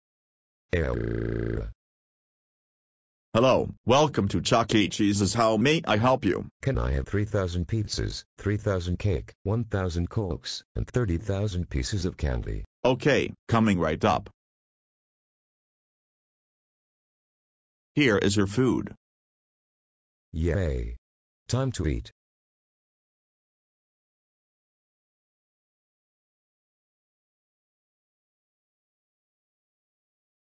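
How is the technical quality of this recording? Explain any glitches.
No glitches turn up anywhere in this recording, so there's nothing to explain and you can just listen without any surprises.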